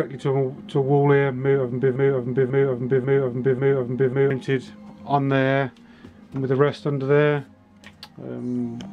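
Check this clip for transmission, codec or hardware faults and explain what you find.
There's a broken-record loop from 1.96 to 4.30 s: a 0.54 s fragment repeats four times, likely from a stalled stream resending its last buffer, so the underlying audio is lost.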